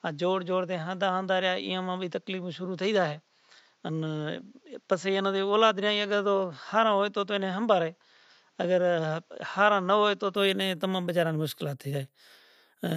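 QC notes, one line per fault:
0.0–10.36 s, input switched to a poorer device: the speech is band-limited, with nothing above 7.6 kHz, so it sounds duller until 10.36 s, where the full band returns with no gap and no obvious level jump. A faint noise floor, about 45 dB below the speech, sits under this span. On a spectrogram the energy stops flat at 7.6 kHz and then extends upward after the change. The waveform stays even across it. A lower-grade microphone or headset input was likely active during this span.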